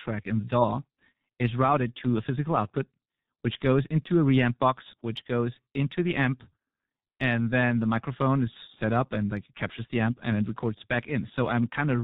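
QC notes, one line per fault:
Throughout, G.723.1 codec: the speech has been squeezed through a low-rate internet-telephony coder, most likely at 6.3 kbit/s, and the damage is heavy. Nothing above 4 kHz survives, so the top end is gone and the result is muffled. The coder works in 30 ms blocks and refreshes its model of the voice only slowly, so quick changes get smeared. This leaves the voice hoarse and rough-edged and the consonants blurred and indistinct.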